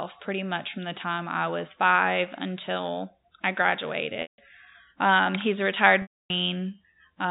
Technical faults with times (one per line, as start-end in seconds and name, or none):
4.22-4.38 packet loss with pitch repetition
6.02-6.30 packet loss with pitch repetition